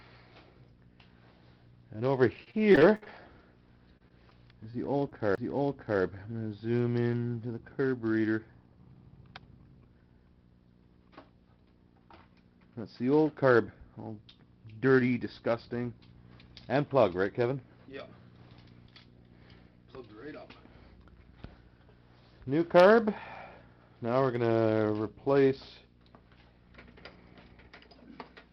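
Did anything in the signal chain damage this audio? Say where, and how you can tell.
Yes. Two stages left audible damage: the network path and the disc playback.

Repeated packet loss (robotic sound) appears from 2.37 to 3.19 s and again from 3.97 to 5.13 s. The first stretch is the worse one. It has roughly nine short holes, the longest about 61 ms, and concealment fills 190 ms, about 27% of the span. The audio turns choppy there. The second stretch is milder, with about five holes, none longer than 31 ms, and 8% concealed. In both, the receiver stretched the last good sound across each missing piece.

A CD skip follows at 5.35 to 5.38 s. A brief mute of a few tens of milliseconds comes just as the sound resumes from a different point. The laser lost tracking and jumped to another turn of the spiral, so the continuity breaks abruptly rather than fading. That places the fault at the disc read stage during playback, not in transmission.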